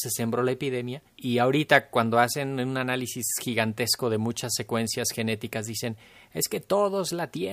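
Nothing in the speech recording points to a technical fault: the signal holds steady throughout, with no audible break, distortion or disturbance anywhere along its course.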